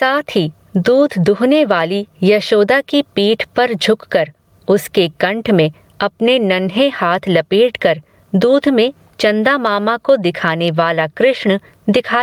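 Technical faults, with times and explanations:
Throughout, gain pumping: a gain swing of about 15 dB, and loud and soft passages sit unnaturally close together, so the whole clip sounds squashed. The likely cause is input gain set far too high for the microphone, with a fast limiter or compressor clamping down on each loud moment and releasing in the gaps between.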